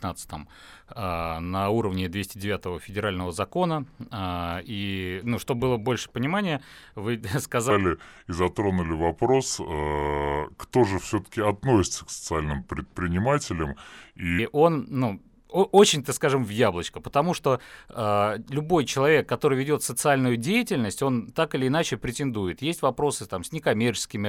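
From 7.71 to 14.39 s there's a section at the wrong speed: the speech drops to about 0.78 times its proper rate, so it drags and everything sits roughly four semitones lower, heavy and sluggish. Because speed and pitch fall together and snap back at 14.39 s, it's likely the stretch was played against the wrong clock, an editor or player running it slower than it was recorded.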